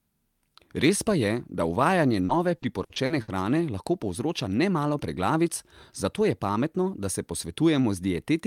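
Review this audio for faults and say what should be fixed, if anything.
Repeated packet loss (robotic sound) runs from 2.11 to 3.30 s, starting just after "pa je da". Six short holes fall in this stretch, the longest 60 ms. Together they total 280 ms of missing audio, roughly a quarter of the span. Each hole is patched by extending the preceding sound, with around 200 ms effectively rebuilt. That gives the speech a choppy, robotic texture with fragments dropped. To prevent it, stabilise the network path and enlarge the jitter buffer, or add forward error correction so lost packets can be recovered.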